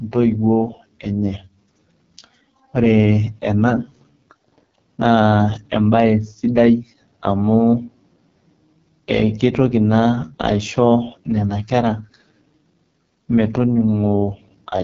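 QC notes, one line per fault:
Throughout: AMR wideband (HD Voice) codec. The speech sounds rough, raspy and buzzy, with a dull top that stops short of crisp sibilance, nothing above about 7.5 kHz. The damage is heavy and points to the codec's lowest mode, likely around 6.6 kbit/s, where the pulse-driven vocal tract model has too few bits to follow the voice closely and the band above 6.4 kHz is only filled with shaped noise.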